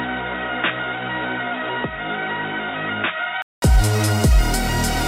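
From the start to 3.62 s, the audio sounds dull and boxy, with nothing above 3.8 kHz. It also sits roughly 10 dB lower and carries its own background noise, well below the signal. At 3.62 s there is a gap of about 200 ms, and then the sound opens up and clears. This points to an input switched to a poorer device, likely a lower-grade microphone or a headset's call profile, before the system moved to a better input.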